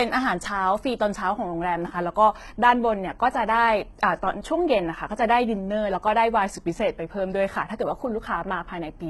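All the way through, the speech has gritty, metallic s sounds and a synthetic-bright treble, likely HE-AAC compression squeezed heavily, which fits a bitrate around 16 kbps.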